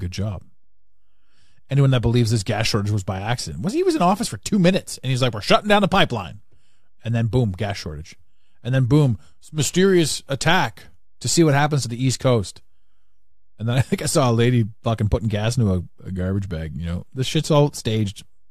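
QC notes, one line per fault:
No faults heard in this speech clip.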